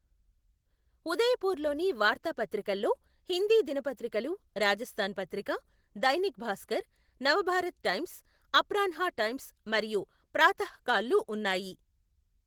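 Opus voice compression runs throughout: hybrid coding with coarse excitation leaves the full-band speech plainly hoarse and slightly robotic, which fits a bitrate near 16 kbps.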